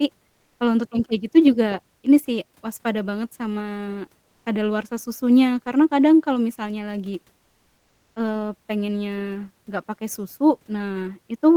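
At 0.29 to 0.59 s and again at 4.25 to 4.45 s, the real background in a speech pause gives way to comfort noise in place of the background: a steady, featureless noise lasting 300 ms and then 200 ms, quieter by about 2 dB the first time and level the second. The likely cause is discontinuous transmission, consistent with Opus DTX. Unlike a noise gate's dead silence, something remains, but it loses the background's texture.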